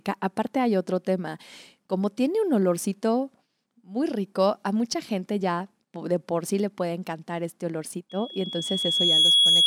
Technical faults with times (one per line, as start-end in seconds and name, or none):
8.09-9.67 loudspeaker feedback squeal